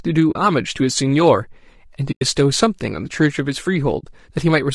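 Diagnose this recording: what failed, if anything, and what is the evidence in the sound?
Throughout, the speech sounds rough and grainy, with noise between harmonics and a synthetic top band. This is low-delay AAC compression, likely AAC-ELD at a low bitrate. It differs from noise reduction artefacts because the roughness tracks the pitch structure.

AAC frame loss with muting leaves soft-edged holes at 0.31–0.36 s, 2.11–2.22 s and 3.99–4.05 s, lasting about 40, 100 and 40 ms. Each gap fades out and in, unlike a hard buffer dropout.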